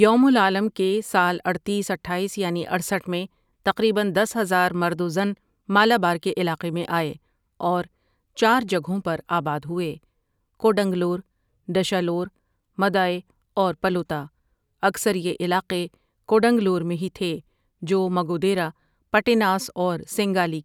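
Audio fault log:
No fault is heard in this speech clip.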